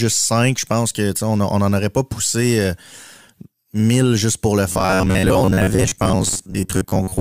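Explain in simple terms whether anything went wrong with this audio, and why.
Something goes wrong at 4.72 s, right after "mille juste pour le", and lasts to the end at 7.20 s. The speech turns into a stiff, metallic buzz around 94 Hz, a robotic sound from repeated short buffers. New audio likely arrived too slowly, so the player kept repeating the last snippet of about 11 ms, filling roughly half the time. Unlike plain dropouts, there is no silence, and the buzz keeps one fixed pitch while loosely tracking the speech.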